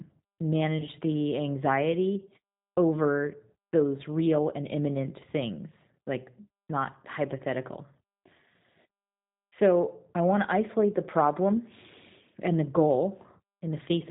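The whole clip runs through the G.729 codec, and the damage is plainly audible. It rebuilds the speech from a vocal tract filter, a pitch predictor and a handful of pulses per frame. That leaves it rough and a bit synthetic, and nothing above 4 kHz gets through, so it sounds narrow and phone-like. The grainy texture sounds like the 8 kbit/s G.729A variant.

At about 0.78 s there's VoIP packet loss concealed by the speech codec. Around 20 ms of audio went missing, which fits a single dropped packet. The decoder filled the hole by stretching its last pitch and filter settings at falling gain. Each frame builds on the previous one, so the sound stays weak or distorted until about 0.87 s, just before "the anxiety over those".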